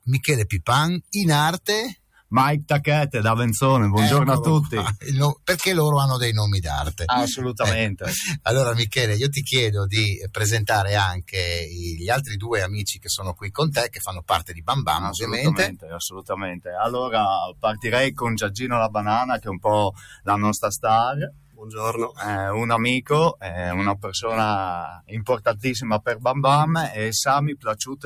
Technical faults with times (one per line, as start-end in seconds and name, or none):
0.00-28.06 noise suppressor applied to music or sounds
1.95-2.32 sound cut by the noise suppressor
4.98-5.47 sound cut by the noise suppressor
10.16-10.32 sound cut by the noise suppressor
11.24-16.67 sound cut by the noise suppressor
17.48-22.24 sound cut by the noise suppressor
23.01-24.18 sound cut by the noise suppressor
24.88-26.25 sound cut by the noise suppressor
27.55-28.06 sound cut by the noise suppressor